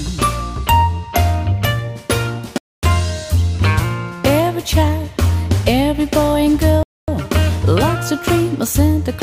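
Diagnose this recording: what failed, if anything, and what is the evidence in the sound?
Chunked storage or playback inserted silence at each join, a gap between chunks: 250 ms holes at 2.58–2.83 s and 6.83–7.08 s, recurring after each 4 s chunk.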